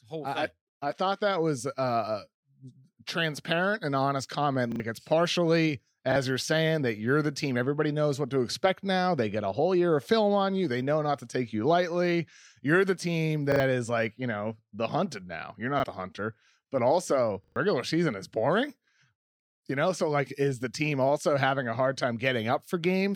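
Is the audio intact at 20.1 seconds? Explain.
Yes, the speech at 20.1 seconds is intact, with no fault in the sound at that moment.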